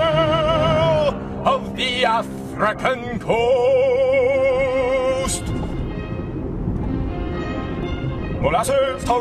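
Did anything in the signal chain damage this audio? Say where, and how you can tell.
Yes. From 7.65 s to the end at 9.21 s there is a time-stretched section: the pace abruptly jumps to about 1.91 times the preceding rate, yet the pitch does not rise with it, so the audio sounds rushed rather than chipmunked. That combination points to a pitch-preserving time-stretch, likely applied by software in the processing or playback stage, which compresses duration by discarding short segments of the waveform and splicing the remainder together.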